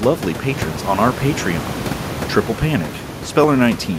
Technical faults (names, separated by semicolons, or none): clock drift buffer slips